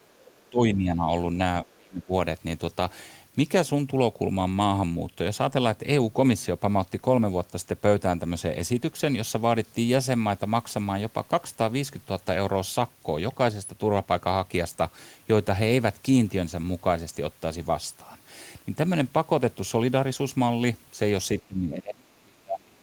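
From 0.08 to 1.09 s the speech dips by up to about 15 dB, likely speech suppressed in double talk: the echo canceller turns the talker down along with the echo. The waveform envelope sags and the upper bands thin on the spectrogram. From 0.37 to 0.5 s a faint second voice, about 40 dB below the speech, is likely the other side's voice leaking through as residual echo. It shows as a weak, separate harmonic trace. The same suppression returns deeper, about 30 dB, from 1.63 to 2.12 s and from 21.47 s to the end, leaving near-gaps in the waveform.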